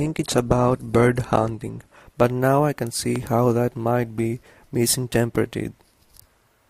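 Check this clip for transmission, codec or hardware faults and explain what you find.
Two kinds of fault are present: an adaptive stream starting at a low bitrate, then two loud pops.

From 0 to 2.0 s the player is on an adaptive stream that starts at a low bitrate, which fits a heavily compressed version of around 16 kbit/s, before stepping up to one near 64 kbit/s. The speech sounds dull and smeared, with nothing above 12.2 kHz, then brightens abruptly without any gap.

At 2.20–2.22 s and again at 3.16–3.18 s, a single loud pop sits on top of the speech, which continues underneath. Each peaks around 10 dB above the signal. They are likely caused by a voltage spike from a plug, switch, static discharge or driver glitch entering the signal chain.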